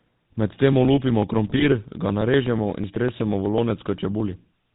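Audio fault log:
Throughout: GSM full-rate codec. Buzzy, gravelly roughness and nothing above 4 kHz, consistent with a 13 kbps pulse-excited vocal-tract model coding the speech.
1.49–1.65 s: GSM bit errors. The speech breaks into squawks and gargling as corrupted filter, pitch and gain values distort several consecutive decoded frames.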